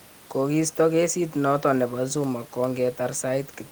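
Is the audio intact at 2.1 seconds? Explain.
Yes, the speech at 2.1 s is intact, with only the room's own background noise sitting about 28 dB beneath it.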